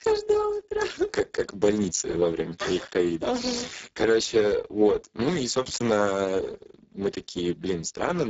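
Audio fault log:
Throughout: Speex codec, heavy damage leaves speech hoarse and near-robotic, consistent with roughly 6 kbps; unlike plain band-limiting, the content from 4 to 7.7 kHz is only shaped noise.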